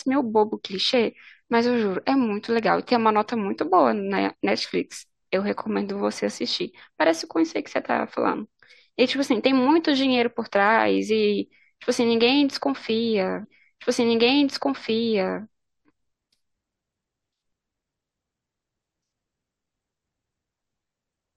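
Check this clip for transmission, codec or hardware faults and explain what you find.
One transmission fault is present. From 13.43 to 15.43 s, a stream segment is repeated: the player queued the same segment twice, so about 2.0 s of speech replays after a small blip at the jump back.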